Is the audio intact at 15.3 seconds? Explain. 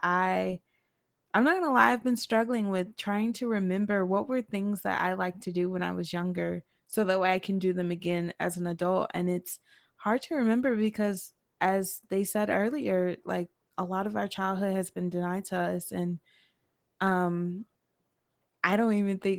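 No. At 15.3 seconds the speech sounds muffled, hoarse and faintly robotic, and the damage is plainly audible. This is Opus voice compression, and it runs through the whole clip. At this low rate the encoder models the voice with linear prediction and spends very few bits on the excitation. That coarse coding causes the rasp. The sound points to a rate near 16 kbps in the codec's hybrid voice mode, working in 20 ms frames.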